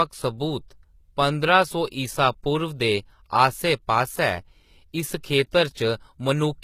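Throughout the speech, the s sounds come out gritty and metallic, and nothing is heard above 14.9 kHz. This is likely HE-AAC compression at a very low bitrate, around 20 kbps: the treble is rebuilt from copied lower bands, so its harmonics no longer align.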